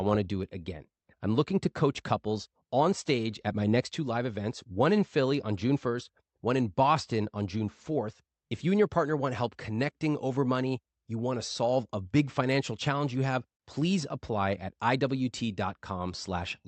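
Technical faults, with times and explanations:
Nothing to flag here; the speech came through an ordinary call link and sounds as expected for it, with the top end stopping around 8 kHz.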